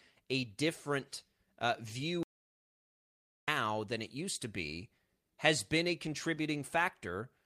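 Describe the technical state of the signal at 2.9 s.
At 2.9 s the signal is dead silent, with no room tone at all. The speech cuts off abruptly after "a different uh" at 2.23 s and resumes mid-flow at 3.48 s with "than it used to", so about 1.25 s is simply missing. This is an audio dropout to silence. The input was likely lost for that span through a disconnected device, a failed link or an accidental mute, while the recorder kept writing empty samples.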